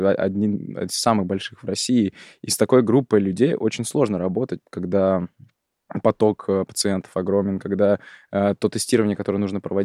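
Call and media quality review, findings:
No defects found in the speech signal; level, continuity and timing hold steady throughout with nothing needing a ticket.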